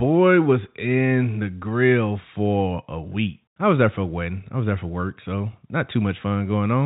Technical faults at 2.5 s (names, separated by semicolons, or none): none